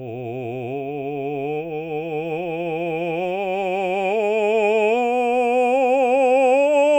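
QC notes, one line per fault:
Nothing stood out on listening to this music.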